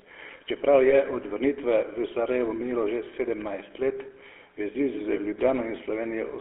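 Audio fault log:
Throughout: GSM full-rate codec. Speech passed through the full-rate GSM coder, which fits 13 kbit/s, and the 300 Hz to 3.4 kHz line, leaving plainly audible buzzy, gravelly roughness with no treble.
0.90–0.95 s and 5.14–5.18 s: lost GSM frames. Each gap points to one lost 20 ms frame, patched by repeating the previous frame's settings, giving a brief metallic ring just before "od vrnitve v" and again later.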